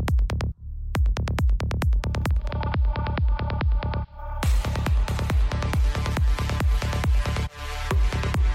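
Digital radio blending to analogue from 2.27 to 4.30 s: the receiver cross-fades over about 0.3 s to the AM broadcast, dropping about 1 dB, and adding faint hiss.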